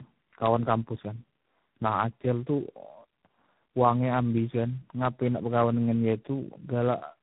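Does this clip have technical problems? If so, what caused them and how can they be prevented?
Yes. Tandem speech coding runs throughout: the speech is rough, muffled and warbly with nothing above 3.9 kHz, which fits AMR-NB twice and then G.726. Prevent it by negotiating one codec end to end.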